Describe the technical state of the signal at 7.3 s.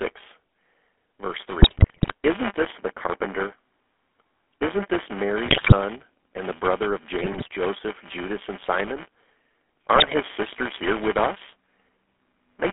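GSM bit errors run from 7.22 to 7.48 s, so 7.3 s falls inside the burst. Corrupted bits reached the decoder and scrambled its filter, pitch and gain values frame by frame. The speech breaks into squawks, pops and gargling. The span fits around a dozen 20 ms frames, and the damage points to an error rate of roughly 3 percent.

Buffer tearing is also present at 7.3 s, as it is across the whole clip. The writer and reader of the playback ring buffer have drifted so that they cross in every period. A small slice of each buffer, around a twentieth, replays audio from roughly 15 ms earlier, with hard joins on both sides. This gives a steady robotic rattle at 200 Hz whenever sound is present.

The GSM full-rate codec shapes this moment too, as it does throughout. Its vocal-tract model is driven by sparse, regularly spaced pulses, which gives the speech a plainly audible buzzy, gravelly roughness. 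The band is held between 250 Hz and 3.5 kHz, and the sound points to a 13 kbps stream.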